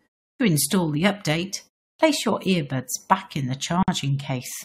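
At 0.34 s, after about a third of a second of silence, the speech resumes with "install the update" missing its opening, and at 1.94 s the same happens before "your earbuds back in", following a pause of similar length. This is a clipped start after a pause: the output device dozes in the quiet and takes roughly 56 ms and 54 ms to wake, so the first sounds vanish. On a waveform each phrase begins abruptly straight out of flat silence, with no onset ramp. A spectrogram shows the speech energy starting at a hard vertical edge.

At 3.83 s, just after "earbuds back in the", a hole of about 52 ms opens in the running speech, and the sound then continues from where it stopped. This is a gap at a join of encoded pieces: separately encoded segments were joined untrimmed, so the encoder's start-up silence and final-frame padding remain between them. Its position fits pieces about 4 s long. A spectrogram shows a narrow blank column with slightly smeared borders, and the waveform dips to near silence and back.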